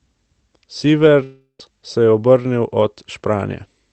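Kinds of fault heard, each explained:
Long network dropout: At 1.23 s the speech turns into a fading, buzzy smear of its last sound, then goes silent for about 80 ms and resumes at 1.61 s with that stretch lost. Likely the packets stopped arriving and the receiver filled the gap.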